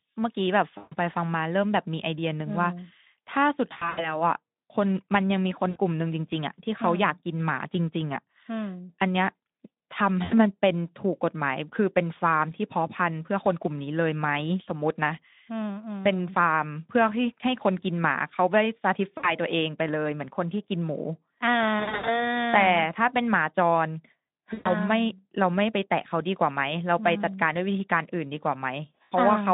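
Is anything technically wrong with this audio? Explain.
Yes. The speech, carried over a narrowband Speex link limited to roughly 150 Hz to 3.7 kHz, suffers VoIP packet loss concealed by the speech codec at 0.77 to 0.95 s, 3.73 to 4.23 s, 5.69 to 5.77 s, 10.23 to 10.43 s, 19.17 to 19.32 s, 21.79 to 22.29 s, 24.53 to 24.70 s and 29.03 to 29.12 s.

Packets fail to arrive, and the decoder fills each gap by extending the last pitch period and spectral envelope it received, turning the level down step by step. Most gaps last 60 to 140 ms. The ones near 3.7 s and 21.8 s are scattered bursts of 140 ms and 200 ms, with runs of up to 80 ms. You hear the sound smear into a fading buzz or tinted noise. Because each decoded frame depends on the previous one, the speech stays thin and distorted briefly after each gap.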